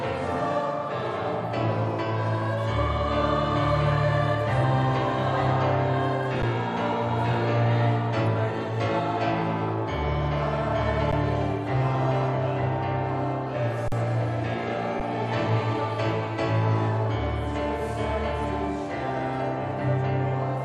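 Output underruns with held sample occur at 6.42 s, 11.12 s and 15.00 s, each about 11 ms, consistent with a 512-sample buffer. A longer one runs from 13.88 to 13.92 s. The sound freezes flat.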